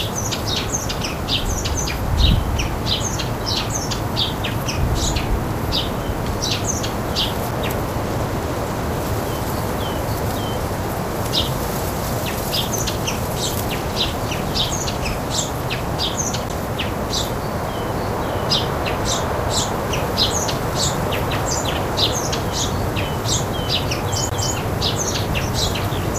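At 7.51 s, 16.49 s and 24.3 s the playback has a CD skip. The laser loses its track and lands on another turn of the disc's spiral, so the player briefly mutes and then resumes from a different point. Each skip is heard as a short tick followed by an abrupt jump in the sound. The mutes grow longer through the clip, from a few milliseconds at the first skip to around 10 ms and then around 20 ms at the last.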